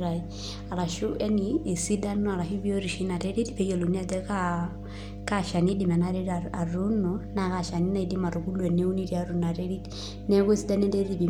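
Mains hum runs through the whole speech recording, a steady low tone at 50 Hz sitting underneath everything from the first moment to the last. Power-line current has leaked into the signal path, most plausibly through a ground loop between connected equipment or by induction from a nearby transformer. The hum is strong, roughly 10 dB below the speech level, so it stays clearly audible in the pauses and as a constant drone beneath the talking.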